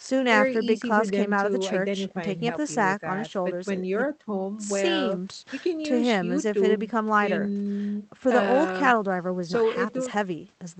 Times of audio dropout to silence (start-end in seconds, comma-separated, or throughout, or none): none